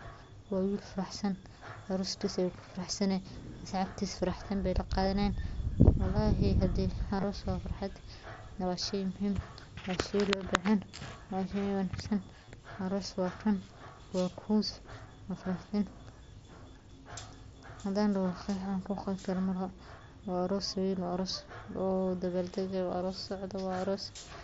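Just after "wallahi hade", from 7.17 to 7.24 s, there is concealed Bluetooth headset packet loss. Packets from the headset never reached the phone. The receiver patched each gap by repeating a matching stretch of recent waveform. Losses total about 45 ms over 60 ms, in runs up to 15 ms, so the patch is a brief buzzy flutter. At 12.43 to 12.51 s it recurs, with 52.5 ms lost over 75 ms. A 30 ms run holds a tone, then warbles as real sound returns, over the light grain of the mSBC link.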